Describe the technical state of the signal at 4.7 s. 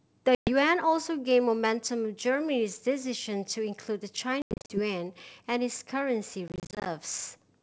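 At 4.7 s, packet loss on an ADPCM call: between 4.42 and 4.80 s about 230 ms drops out in silent gaps up to 90 ms, seen as hard-edged blank columns on a spectrogram. The decoder's predictor and step size lose sync; sound returns slightly distorted.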